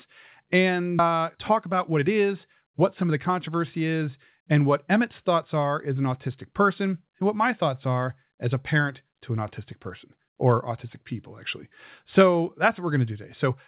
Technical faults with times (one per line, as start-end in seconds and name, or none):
0.99 skip ahead
1.56-2.08 jitter buffer speed-up
3.02-3.49 jitter buffer speed-up